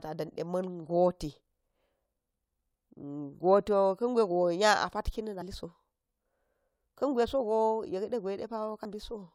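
Twice in this speech, the decoder dropped whole compressed frames, either missing from the file or rejected as damaged. Playback skips forward at 5.41 s and again at 8.84 s, each time losing about 40 ms, which fits roughly two frames of 21.3 ms. These compressed frames skipped show up as a small jump in the speech.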